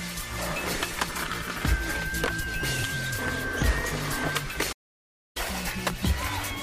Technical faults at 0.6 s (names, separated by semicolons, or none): none